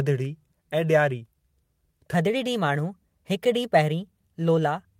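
From 2.14 s to the end of the clip, the speech abruptly turns quicker and higher, with the voice rising by about two semitones and the delivery hurrying forward, so the later part sounds slightly chipmunk-like against the opening. This is a section at the wrong speed, running 1.15 times faster than it was recorded. Because pitch and tempo shift together at one instant, the likely cause is that part being played or rendered against a mismatched clock.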